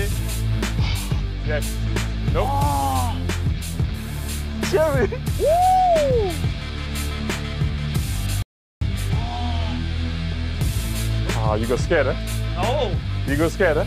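At 8.42 s the sound cuts off abruptly into silence, with no room tone underneath, and resumes mid-flow at 8.81 s. This is an audio dropout to silence lasting about 0.39 s, likely from the input briefly disconnecting while the recorder kept writing zeros.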